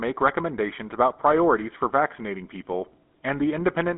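GSM full-rate codec damage runs throughout, consistent with a 13 kbit/s link. Its coarse pulse-driven excitation gives the speech a buzzy, gravelly roughness, and nothing passes above 3.8 kHz.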